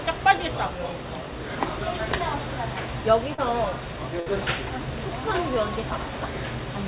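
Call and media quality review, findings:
Short concealed packet loss, 3.34 to 3.40 s: about 40 ms failed to reach the decoder in time. The receiver extended the preceding sound over the hole, leaving a brief smear or wobble before real audio resumes.

Burst of packet loss, 4.20 to 4.28 s: roughly 60 ms of consecutive audio was lost or arrived too late. The concealment held the last sound and let it fade to a buzz or hiss. Playback resumes with that stretch missing.

Both faults were heard over a narrowband call path with nothing above 4 kHz, which fits G.711 A-law.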